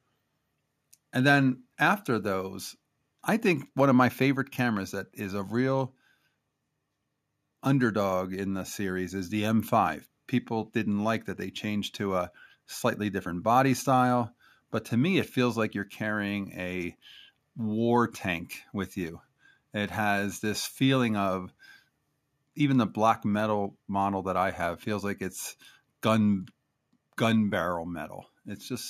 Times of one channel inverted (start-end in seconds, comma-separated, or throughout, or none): none